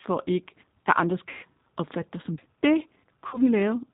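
Throughout the speech, the G.729 codec is plainly audible. This 8 kbit/s coder rebuilds each 10 ms frame from a vocal tract filter, a pitch predictor and a handful of pulses, so the voice comes out slightly rough and synthetic. A spectrogram shows nothing above 4 kHz, with a hard ceiling, and harmonics look smeared and grainy rather than clean lines.

From 1.29 to 1.46 s, VoIP packet loss concealed by the speech codec covers about 140 ms of missing audio, which fits seven 20 ms packets. The decoder keeps repeating its last pitch and filter at falling gain, so the sound is stretched into a buzzy tone or a coloured noise that fades, and the voice stays weak just afterwards. The spectrogram shows the last spectrum frozen and tapering off, and the waveform shows a repetitive, shrinking envelope. A shorter loss of about 60 ms from 3.27 to 3.41 s sounds and looks the same, fitting three lost packets.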